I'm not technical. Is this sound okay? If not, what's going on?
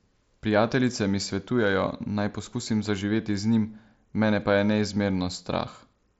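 Yes, nothing in this speech recording has gone wrong. It sounds like it went through a Bluetooth headset using the mSBC codec, which leaves a faint grainy edge on the louder moments and caps the sound at 8 kHz.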